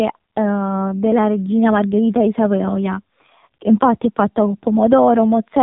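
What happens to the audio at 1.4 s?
At 1.4 s the speech carries AMR narrowband mobile codec damage, present across the whole clip. Nothing above 3.8 kHz survives, and the vocal-tract model driven by sparse pulses leaves the voice heavily buzzy and synthetic, which fits a low bitrate around 5.9 kbps.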